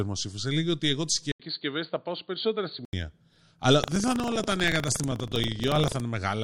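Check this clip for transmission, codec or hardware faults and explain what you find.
Two faults are audible: a temporary change to a poorer input device, and buffer tearing in the final section of the speech.

Input switched to a poorer device, from 1.32 to 2.93 s, just after "ότι εγώ τι". A brief gap of about 80 ms marks the switch, then the sound turns dull or boxy until it clears again at 2.93 s. The likely cause is the system moving to another microphone or a headset's call profile with a narrower passband. The level stays about the same, and a new noise floor sits far below the speech, roughly 55 dB down. On a spectrogram the upper band empties abruptly across that span, and a short blank marks the switch.

Buffer tearing, from 3.80 to 6.02 s, is heard as a robotic buzz at 25 Hz that is present only while speech is present. The writer and reader of the audio ring buffer have drifted so that they cross inside each period. 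This period rate fits a 40 ms buffer. A small portion of each buffer, around 7 percent, replays audio from about 70 ms earlier, with hard joins at both ends. The waveform shows a step discontinuity every 40 ms, and the spectrogram shows evenly spaced vertical broadband striations.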